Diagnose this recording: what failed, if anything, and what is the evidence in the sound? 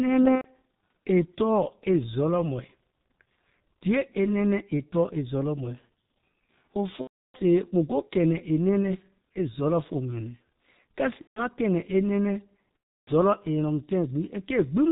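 Codec stage: the whole clip is muffled and hoarse, with nothing above 4 kHz and smeared consonants. That points to the G.723.1 codec at around 6.3 kbit/s, heavily degraded.

Network stage: VoIP packet loss concealed by the speech codec at 0.35–0.46, 7.01–7.38, 11.21–11.43 and 12.84–13.10 s. The decoder stretches its last frames into a buzzy tone or coloured noise that fades.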